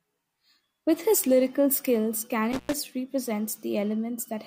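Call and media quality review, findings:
Intermittent contact, 2.52–2.74 s, just after "his lyrical skills": speech drops out for about 99 ms with crackle at both edges. Probable component: loose cable or plug. The circuit briefly opens, then reconnects. The scratchy make-and-break edges set it apart from a clean network dropout or packet loss.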